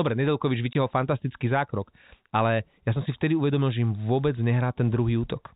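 Packet loss filled with silence hits this speech clip from 0.73 to 0.75 s, a 20 ms hole that fits two lost 10 ms packets. The receiver substituted digital silence, so the sound stops dead and restarts with hard edges, heard through telephone-band G.711 coding that cuts everything above 4 kHz.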